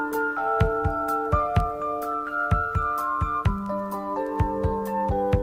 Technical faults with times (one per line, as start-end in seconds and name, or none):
none